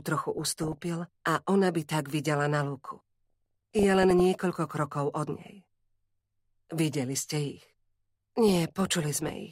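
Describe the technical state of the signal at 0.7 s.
At 0.7 s the signal is in the middle of DAB burbling, which runs from about 0.38 to 0.88 s. Weak reception lets bit errors, on the order of one percent, slip past error correction into the MP2 data. Corrupted samples put short blips of noise in single sub-bands, and corrupted scale factors make individual sub-bands jump in level for up to a frame, across roughly twenty damaged frames. The result is short noisy blips and sudden level jumps in parts of the spectrum. On a spectrogram this shows as short rectangular patches flaring in separate narrow frequency strips. The waveform shows erratic bursts.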